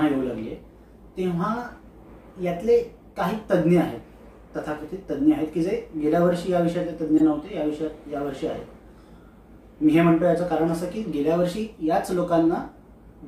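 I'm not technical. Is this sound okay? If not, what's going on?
No. There is one fault, a corrupt frame decoded. Around 7.17 to 7.26 seconds, a few chunks of the compressed audio data were damaged, and the player decoded them anyway instead of skipping or hiding them. Because the damaged data gives the decoder wrong instructions, it briefly creates sound at frequencies that don't belong there. You hear this as a short, sharp chirp or burst of noise lasting about a tenth of a second.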